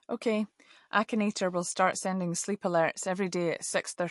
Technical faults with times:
0.00-4.11 MP3 compression

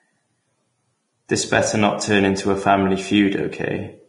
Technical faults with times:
0.00-4.08 Vorbis compression

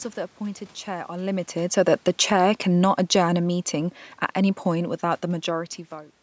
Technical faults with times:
1.90-5.73 automatic gain falling

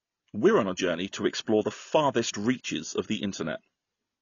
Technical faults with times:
0.00-4.21 AAC compression

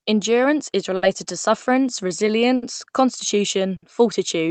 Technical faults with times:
0.00-4.51 clock drift between sender and receiver
0.96-1.04 short stall from a late packet
2.56-2.64 short stall from a late packet
3.76-3.84 short stall from a late packet

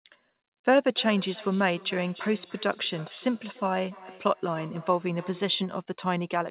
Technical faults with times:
0.94-5.79 feedback echo between two devices

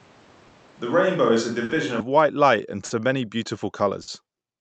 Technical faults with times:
0.00-4.61 clock drift between sender and receiver
0.00-2.00 switch to a distant microphone
0.47-0.55 short stall from a late packet
1.64-1.72 short stall from a late packet
2.85-2.93 short stall from a late packet
4.02-4.10 short stall from a late packet

